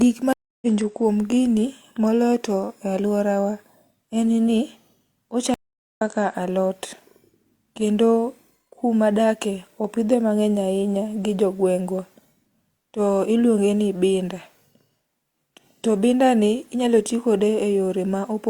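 Stream reconnect in this speech clip at 0.33 to 0.67 s and again at 5.54 to 6.02 s: the connection dropped and the player fell silent, for 290 ms and then 429 ms, before reconnecting and starting a fresh decoder mid-stream. Each time the speech resumes about a fifth of a second further on than where it stopped, so a short stretch is skipped, and the first moments after the gap come in muted or faded.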